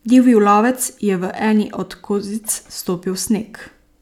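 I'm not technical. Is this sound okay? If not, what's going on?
Yes, there are no technical faults to report in this speech clip.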